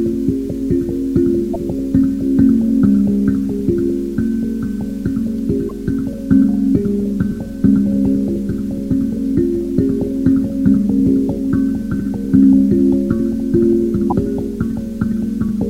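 A recording of sounds breaks up briefly at 1.53 to 1.56 s, 5.68 to 5.71 s and 14.10 to 14.12 s. Each time, a roughly 30 ms glitch follows a small forward skip, which fits one 26.1 ms MP3 frame and likely comes from a broken MP3 bit reservoir. Unlike a simple dropout, material goes missing rather than pausing.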